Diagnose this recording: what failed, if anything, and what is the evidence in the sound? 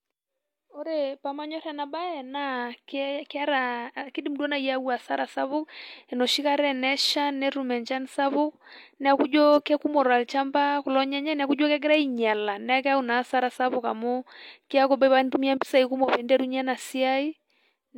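Nothing in this speech recording points to a failure at any stage of the chain. There is no audible event that would implicate the wiring, conversion, processing, transmission or playback.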